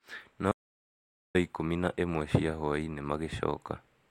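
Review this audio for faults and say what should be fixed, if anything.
From 0.52 to 1.35 s the speech cuts to total silence with no room tone, an audio dropout to silence, likely from lost input recorded as silence. Secure connections and monitor input levels during recording so a lost signal is noticed and the passage retaken.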